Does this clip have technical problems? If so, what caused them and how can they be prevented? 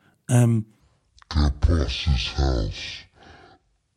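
Yes. From 0.8 s to the end there is a section at the wrong speed, likely because a player or editor ran that part against a mismatched clock at half speed. The speech becomes slow and drawn out, with its pitch dropping roughly ten semitones. Keeping clock and sample-rate settings matched at every stage of editing and playback prevents this.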